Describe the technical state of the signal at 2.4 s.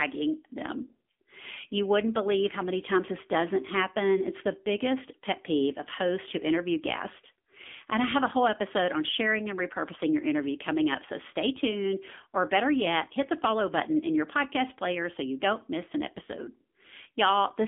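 At 2.4 s the speech carries AMR narrowband mobile codec damage, present across the whole clip. The signal has passed through an 8 kHz mobile speech coder. It rebuilds the voice from a vocal-tract model excited by a few pulses per subframe. The line band runs from 200 Hz to 3.5 kHz, and nothing above 3.7 kHz survives. The damage is plainly audible: a buzzy, synthetic timbre that fits a low mode near 7.4 kbps.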